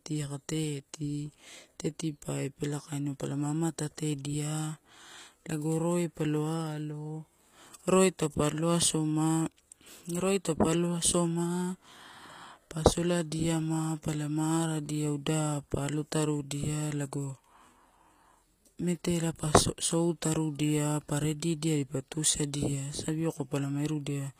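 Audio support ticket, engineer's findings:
HE-AAC compression, full clip. Plainly audible codec damage: s sounds gritty, metallic and lispy, treble bright but synthetic. Likely HE-AAC v2 encoder, spectral band replication rebuilding upper band from copied lower bands; harmonics misaligned across crossover. Sound points to a low bitrate, consistent with 24 kbps. Spectrogram: upper region shows repeated, smeared copies of lower-band patterns under a coarse envelope, hard ceiling with nothing above 15.5 kHz.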